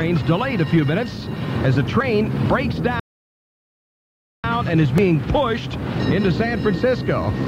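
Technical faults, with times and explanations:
2.01 s and 4.98 s: audio missing between chunks. A tiny slice, around 20 ms, vanishes and the two sides butt together. This is likely from 3 s processing chunks dropping audio at each handover.
3.00–4.44 s: rebuffering stall. The sound drops to silence, then resumes exactly where it stopped. The player ran dry, adding 1.44 s without losing anything.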